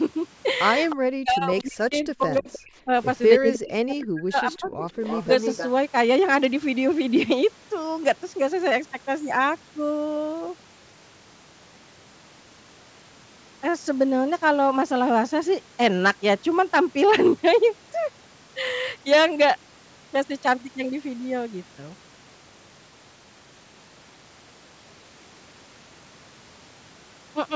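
An echo canceller on a far end playing through a loudspeaker likely let some of its microphone pickup through, giving echo leak: a copy of the speech returning about 309 ms late. At 0.89–0.96 s it is a brief scrap roughly 15 dB under the speech. From 0.96 to 2.93 s both sides talk at once, and the canceller likely could not tell its own talker from the loudspeaker echo, so it cut both: speech suppressed in double talk. The speech dips by as much as about 40 dB and breaks up in pieces over roughly a second and a half. Inside that stretch, at 1.60–1.64 s, a fainter echo scrap slips through about 25 dB down. The same suppression returns at 3.39–4.86 s with similar deep, choppy dropouts. From 4.53 to 5.69 s the echo leak is strongest, a delayed duplicate only about 10 dB below the speech, overlapping the end of that suppressed stretch.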